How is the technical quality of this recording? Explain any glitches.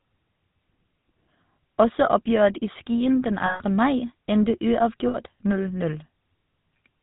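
The recording is limited by a plainly audible narrowband telephone codec, with two short dropouts.

GSM full-rate codec, throughout: the vocal tract is modelled and driven by sparse regular pulses, keeping one excitation sample in three, which fits a 13 kbps GSM stream. Nothing passes above 4 kHz, and the speech carries a plainly audible buzzy, gravelly roughness.

Lost GSM frames, at 3.46 to 3.63 s and 5.08 to 5.17 s: missing frames were filled by repeating the last good frame. The 140 ms and 60 ms gaps are heard as a rough, metallic held ring, held rather than cutting cleanly.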